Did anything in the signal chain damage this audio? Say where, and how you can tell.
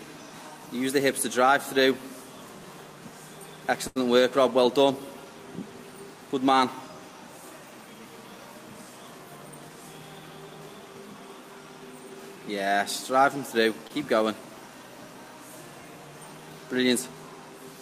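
Yes. The network stage left two short stalls from a late packet, at 3.87 to 3.98 s and at 13.87 to 13.92 s. Each time the jitter buffer ran dry, and the receiver stretched the last sound, by 84 ms and then 27 ms, until the packet turned up. Playback then resumed from the same point. Unlike loss concealment, nothing is skipped: a sound simply hangs on too long with a slight buzz or dip, and the delay grows by the held amount.

The same jitter buffer later performed a speed-up between 9.05 and 9.77 s. After too much audio had queued, the receiver trimmed short pitch-period slices over and over, removing roughly a tenth of a second. The passage runs at 112 % speed and sounds hurried. The pitch stays put, which separates this from a resampling or clock-rate error, where speed and pitch would rise together.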